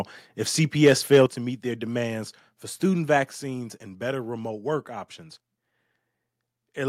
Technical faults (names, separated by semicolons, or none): microphone overload; microphone volume stepped down